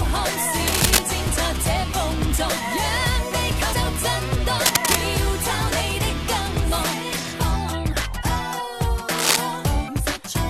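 A worn cable, connector or control being moved is the likely cause of cable scratch noise from 0.67 to 0.99 s, 4.66 to 5.01 s and 9.18 to 9.36 s. Its rapidly shifting contact resistance lays dense, uneven rustling over the sound, about 5 dB above it in the first and last bursts and roughly level with it in the middle one. At 3.72 s and again at 9.87 s, compressed frames are skipped. The decoder never plays whole frames, so the audio jumps ahead by about 150 ms each time.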